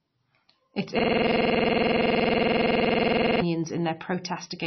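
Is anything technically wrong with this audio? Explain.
Yes, there are two faults. Throughout the speech, nothing is audible above about 5.9 kHz, and the remaining band sounds heavily watery and swirly, with smeared onsets. This is likely MP3 compression at a very low bitrate, around 24 kbps, where weak frequency lines drop in and out between frames. That swirling is what sets it apart from a simple low-pass filter.

From 0.99 s to 3.42 s, a system hang loop replaces the speech. A 46.44 ms fragment repeats exactly, about fifty times, which fits a 2048-sample ring buffer cycling while the system was frozen. At 21.5 Hz it becomes a rough buzzing stutter, and its identical repeats distinguish it from ordinary dropouts or jitter.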